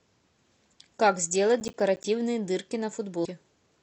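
Speech with two faults. From 1.6 to 2.04 s, processor overload crackle: roughly ten buffers of about 10 ms each miss their deadlines and drop out to silence. The waveform shows hard-edged gaps, and the spectrogram shows vertical broadband streaks. From 3.21 to 3.26 s, damaged data in the compressed stream makes the decoder lose sync and search for the next frame header.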